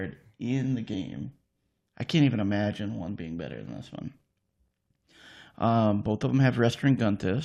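At 0.93 s, right after "in the", a short blip cuts into the speech. It lasts about 10 ms. The cause is damaged data in a compressed stream. A small stretch of the encoded bytes was lost or overwritten. The decoder could not read the frame there correctly. It lost sync and had to find the next valid frame header. The garbled output comes through as a brief chirp, squawk, click or short hole.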